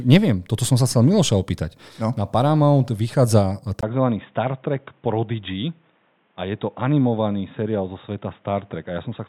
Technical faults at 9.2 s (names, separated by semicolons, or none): input switched to a poorer device